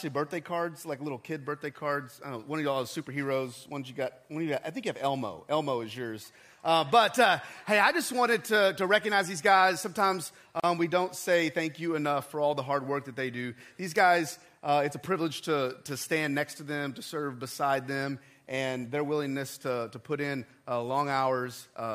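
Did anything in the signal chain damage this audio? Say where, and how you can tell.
Yes, there's a gap at a join of encoded pieces at 10.60 s, lasting about 37 ms. The sound drops out with smeared edges, then resumes right where it stopped. That's codec stage: separately encoded segments spliced without trimming their start delay and end padding.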